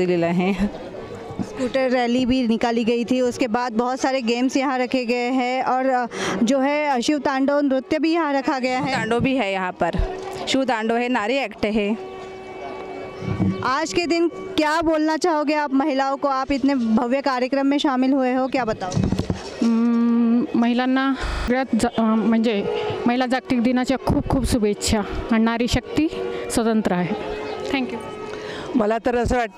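At 21.28 s the sound locks into a rapid stutter, a 40 ms fragment repeating at 25 Hz for five cycles until 21.48 s. This is a system hang loop: the system froze while the hardware kept replaying one buffer, losing about a fifth of a second.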